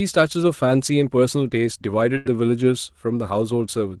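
At 2.17 s a burst of packet loss hits the call stream. A run of audio packets never arrives in time, and the receiver fills the hole for about 80 ms by stretching the last decoded sound and fading it down. Until 2.27 s the speech turns into a brief held, dimming sound instead of moving on. It then resumes with roughly 80 ms of speech simply gone. The surrounding audio carries the coding texture and band limit near 12 kHz of a low-bitrate Opus call.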